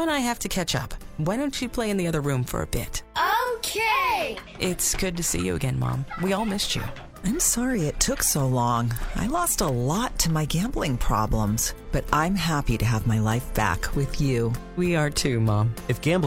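No technical faults can be heard anywhere in this audio. Nothing in the sound points to a problem in the recording or playback chain.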